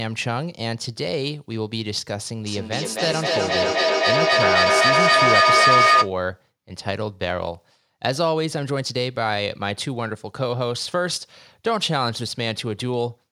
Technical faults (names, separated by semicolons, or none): feedback howl